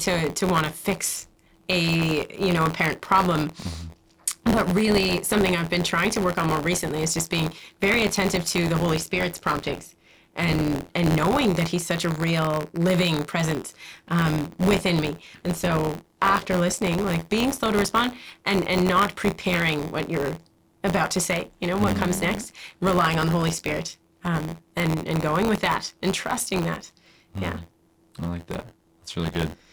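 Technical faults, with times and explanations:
Throughout, buffer tearing: a robotic 86.1 Hz buzz, fitting a 512-sample buffer, as a small slice of each buffer replays audio about 20 ms old.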